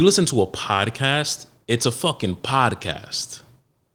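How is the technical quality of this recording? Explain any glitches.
The technical quality holds up, with no glitches to explain.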